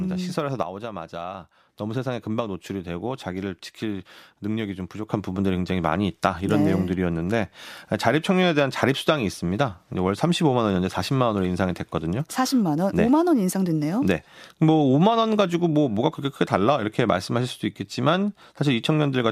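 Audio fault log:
0.63–1.69 s, sudden gain jump: level, including background noise, falls by about 6 dB in one step, then returns. Likely a gain setting applied without a ramp.
5.10 s to end, sudden gain jump: sound and noise floor rise together by about 6 dB at once, likely from an unramped gain change.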